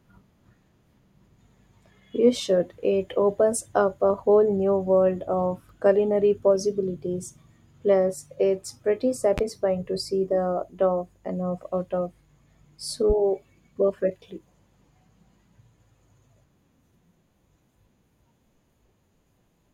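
At 9.38 to 9.41 s, between "it's pretty" and "to see the dough", a single loud pop jumps well above the speech, and at 13.10 to 13.13 s a second, weaker one follows. Each is likely a voltage spike from a plug, switch or static. Unlike a dropout, the speech carries on underneath.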